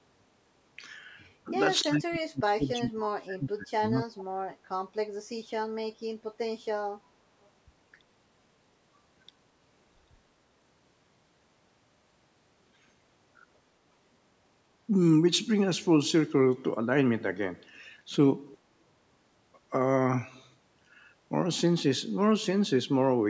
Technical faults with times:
1.80-1.84 echo leak
1.85-4.06 speech suppressed in double talk
4.18-4.23 echo leak
7.44-7.48 echo leak
18.64-18.69 speech suppressed in double talk

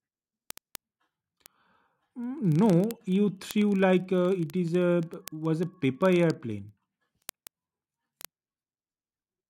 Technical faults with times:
0.12-9.48 word clock ticks

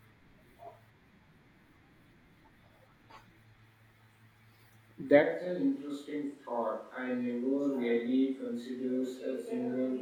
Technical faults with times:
5.24-10.02 switch to a distant microphone

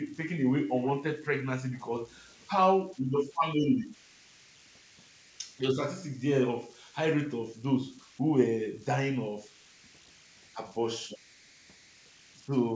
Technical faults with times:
0.00-12.76 converter idle tones
0.81-0.86 echo leak
1.93-2.47 echo leak

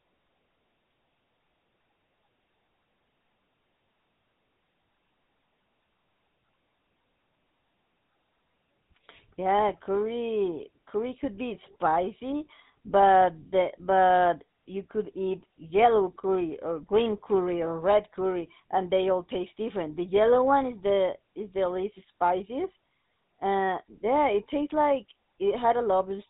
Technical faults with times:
0.00-26.30 GSM full-rate codec

